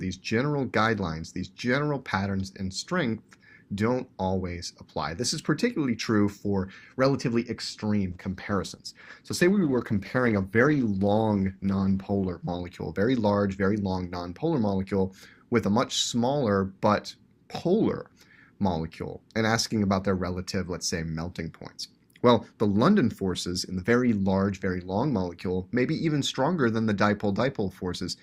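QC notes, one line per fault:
8.14–12.69 s, call bitrate drop: the encoder was squeezed to far fewer bits for about 4.5 s, so the audio turns coarse and watery and the top end is cut away. This fits a fall from roughly 64 kbps to 16 kbps in the Opus stream.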